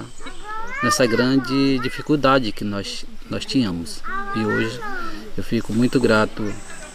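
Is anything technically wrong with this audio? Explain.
No, there is nothing technically wrong with this audio.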